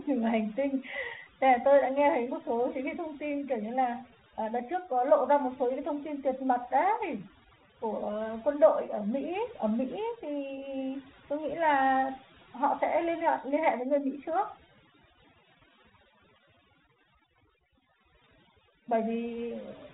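Throughout the speech, the background falls to near silence with twinkling specks: overdone noise removal, cutting away quiet speech alongside the noise, over a telephone band ending near 3.9 kHz.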